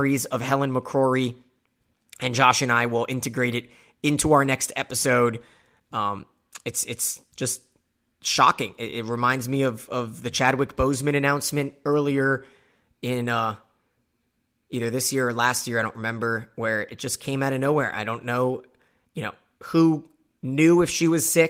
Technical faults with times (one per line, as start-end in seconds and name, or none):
none